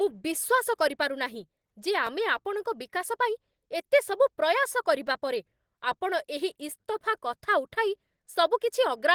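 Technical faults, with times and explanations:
throughout: Opus compression. The speech sounds hoarse, rough and grainy, with plainly audible coding damage, even though content reaches up to about 20.2 kHz. This is likely Opus in its hybrid speech mode at a low bitrate, consistent with 16 kbps, where sparse bits coarsen detail.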